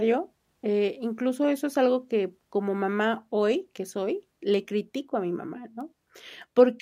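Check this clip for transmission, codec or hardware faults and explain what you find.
Two bit error spikes interrupt this speech, at 4.54 s and 5.81 s. In each, a single bit in the stored or transmitted sample data flipped, so the sample value jumped by a power of two and fell straight back. At 4.54 s this affected two consecutive samples and at 5.81 s just one, each reaching about −28 dBFS. Each is heard as one brief, sharp tick with broadband content that has nothing to do with the surrounding speech.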